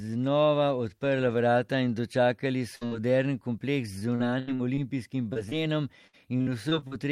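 A run of packets in this speech recording was lost or arrived too late to play at 2.75 to 2.83 s, just after "vrata in dočakali". This burst of packet loss drops about 60 ms, and the receiver stretches the preceding sound into a fading held tail before jumping ahead. Short concealed packet loss follows at 2.87 to 2.93 s, just before "moderen kompleks", then at 5.33 to 5.37 s and 5.49 to 5.53 s. Each hole of 20 to 40 ms is patched by continuing the last sound and blending back, heard as a brief smear or wobble. Repeated packet loss strikes twice. From 3.99 to 4.79 s, after "moderen kompleks", five gaps (the longest 78 ms) leave about a quarter of the stretch patched. From 6.07 to 6.93 s, six gaps (longest 57 ms) do the same. In both stretches the sound turns choppy, with pieces missing.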